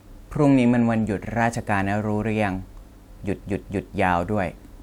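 At 1.28 s the speech hiccups briefly, a 46 ms fragment heard twice. At 3.37 s a longer stutter runs to 3.83 s, where a 232 ms stretch plays three times in a row, adding about half a second. Both are repeated frames: compressed blocks were written or delivered more than once, so the decoder replayed the same audio. The lengths suggest one frame of about 46 ms, then five.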